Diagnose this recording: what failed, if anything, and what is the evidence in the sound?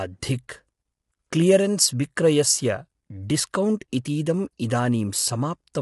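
Low-delay AAC compression throughout, at the codec stage: the speech sounds plainly coded, with grainy harmonics and nothing above 11.6 kHz. This likely comes from AAC-ELD, whose short frames resolve pitch poorly and spend bits quickly, which fits a bitrate near 32 kbps.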